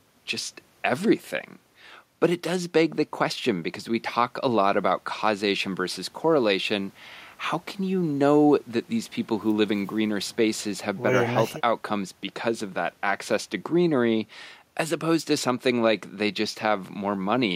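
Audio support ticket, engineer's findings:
Engineer's findings: no audio fault found in the speech recording.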